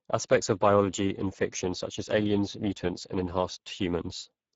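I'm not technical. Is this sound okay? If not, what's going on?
No. Speex codec damage runs through the whole clip, from start to finish. This old internet-calling format squeezed the speech hard, so it sounds hoarse and noisy. Nothing reaches above about 7.7 kHz, and the crisp top sounds are only a hissy imitation.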